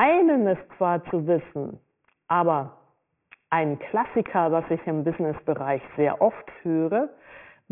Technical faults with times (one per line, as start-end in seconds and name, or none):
0.00-7.71 aliasing